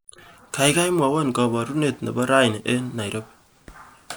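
No audible faults anywhere.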